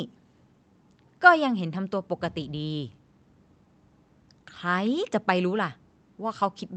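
No technical faults are audible in the speech, which carries the ordinary character of a WebRTC call path with its high end rolled off at about 8 kHz, as expected from an Opus codec at a moderate bitrate of around 32 kbps.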